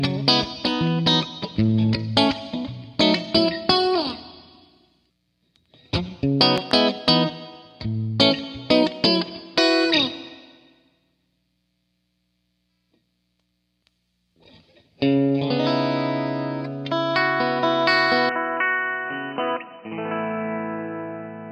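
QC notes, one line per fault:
6.58–6.73 s, loud pop: two sharp pops in quick succession, peaking roughly 15 dB above the sound, which continues underneath. The likely cause is a voltage pulse from a plug, switch, static or driver glitch, which the downstream circuits then shape.
18.29 s to end, input switched to a poorer device: the likely cause is a change of input mid-recording to another microphone or a headset's call profile. From the switch, nothing passes above 3 kHz, so the sound turns dull and boxy. The level drops about 5 dB, and new background noise sits roughly 30 dB below the signal, with no silence at the switch.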